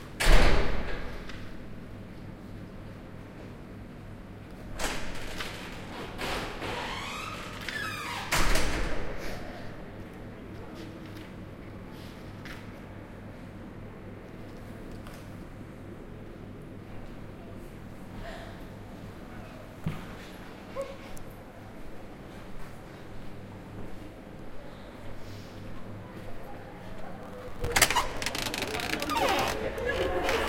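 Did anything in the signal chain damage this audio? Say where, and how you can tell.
Yes. Processor overload crackle at the driver/buffer stage, 27.23 to 28.2 s: missed deadlines repeatedly replayed stale audio, giving a gritty tearing that fits short buffers of around 5 ms.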